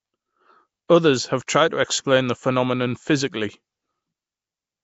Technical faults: Nellymoser compression; pre-echo

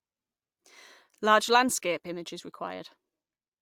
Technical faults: none

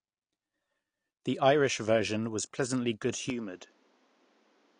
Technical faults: AAC compression; input switched to a poorer device

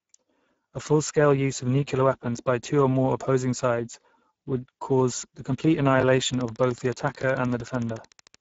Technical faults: Speex codec; chunks out of order; train of clicks

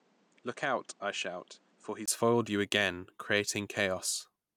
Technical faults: input switched to a poorer device

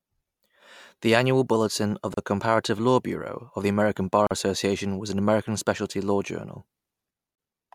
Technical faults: gap at a join of encoded pieces

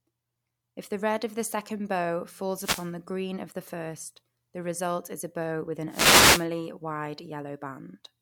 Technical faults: wireless microphone noise hit

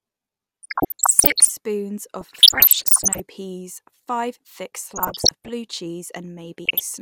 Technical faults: DAB burbling

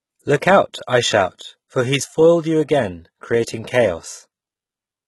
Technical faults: HE-AAC compression

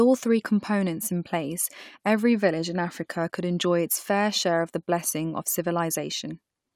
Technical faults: none

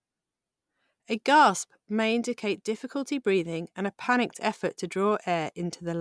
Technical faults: none

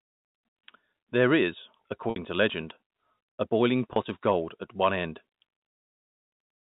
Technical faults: packet loss with pitch repetition; hard clipping

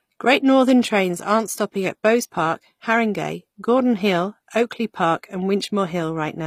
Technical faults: HE-AAC compression

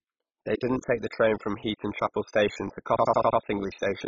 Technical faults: MP2 compression; system hang loop

